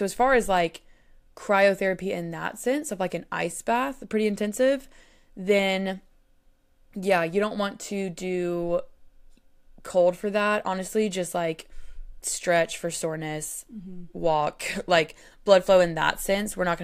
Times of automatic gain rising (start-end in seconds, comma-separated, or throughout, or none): none